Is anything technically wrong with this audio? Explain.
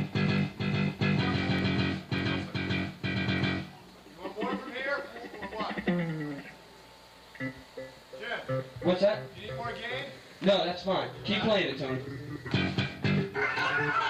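Yes. From 0.38 to 13.59 s a regular click recurs every 0.6 s. These are clock drift buffer slips, likely from two clocks roughly 300 ppm apart repeatedly dropping or repeating samples.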